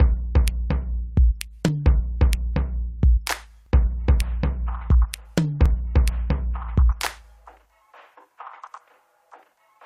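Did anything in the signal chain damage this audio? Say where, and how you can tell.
Yes, overlap between stream segments during playback: tiny skips at 1.68 s, 3.66 s and 5.66–5.68 s, two seconds apart, where 6 to 20 milliseconds of music get trimmed.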